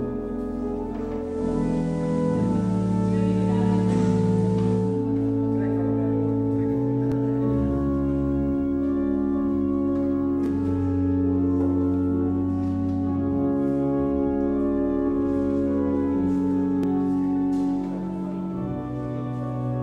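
From 1.15 s to about 5.1 s the receiver drops from its digital stream and blends to the analogue FM broadcast of the same station, crossing over in about 370 ms and later returning. While on FM, the level shifts by about 4 dB, and a hiss sits far below the programme. A codec fault would not add steady hiss. That hiss, together with the smooth cross-fade in and out, marks this as a digital-to-analogue blend rather than a codec glitch.

Three brief repeated-buffer faults follow, at 7.12 s, 10.46 s and 16.83 s. Each time, fresh audio failed to arrive, so the device played its last block once more, a piece about 11.6 ms long, which fits a 512-sample buffer. The result is a tiny click or buzz with a hard join. Unlike a dropout, nothing goes silent and no audio is lost; the same fragment is simply heard twice.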